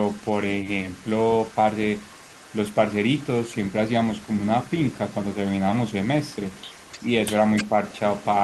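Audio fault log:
Throughout: echo leak. A faint delayed copy of the speech trails the direct signal by about 303 ms, sitting roughly 25 dB below it, so it reads as a soft second voice behind the speech. The likely cause is a far end playing the call on a loudspeaker, where the echo canceller did not fully remove the speaker output its microphone picked up, and that residue was sent back down the line.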